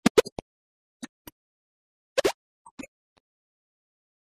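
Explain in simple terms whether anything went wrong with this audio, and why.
The whole clip sounds dull and muffled, with a gurgling, grainy roughness on top. This is likely MP2 compression at too low a data rate: the format splits sound into many frequency bands and, short of space, switches the upper ones off and stores the rest crudely.

At 1.93 seconds the sound abruptly becomes clearly quieter, background included, and stays that way to the end. This is a sudden gain jump, likely a volume change applied all at once instead of being faded in smoothly.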